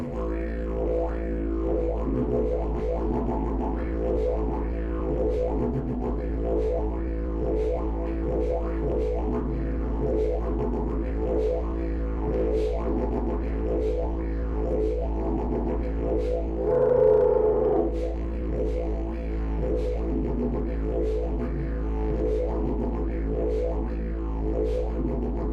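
Skip ahead at 2.79 s: about 0.7 s of audio was dropped while later audio was already queued, so playback jumps forward with no gap and the two sides join directly.

Jitter buffer speed-up from 3.84 to 10.20 s and again from 11.09 to 17.30 s: with more audio buffered than needed, the receiver repeatedly removed short pitch-period pieces, around 100 ms in each stretch, so the sound runs at 102% speed without any change in pitch.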